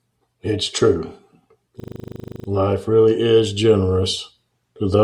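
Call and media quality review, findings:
System hang loop, 1.8–2.48 s: speech replaced by steady 25 Hz buzz. One 40 ms segment repeats 17 times, which points to a driver or host stall while the audio device kept replaying its ring buffer. Short loop length gives buzz rather than stutter. Playback resumes afterward with little or no audio apparently lost.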